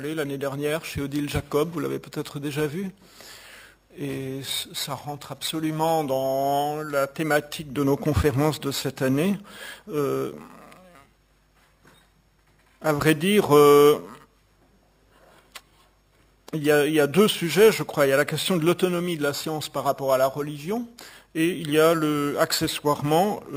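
A bright, metallic fizz rides on the sound from start to finish, rising and falling with its level, with mirrored energy between 6 and 12 kHz at about 18 dB below the signal. This is imaging from sample-and-hold upsampling: each sample was simply repeated, consistent with a 12 kHz source raised to 48 kHz without a smoothing filter.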